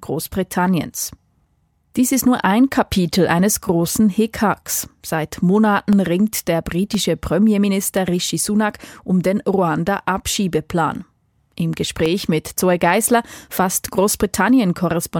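From 0.83 s to 15.12 s the speech carries periodic USB or driver dropouts. Every 1.024 s, something stalls the USB link or audio driver, and a sliver of audio, roughly half a millisecond, never arrives and is replaced by silence. Each gap cuts the waveform abruptly, producing a tick or pop, about fifteen in all, that recurs with clock-like regularity and is audible only while the speech is present.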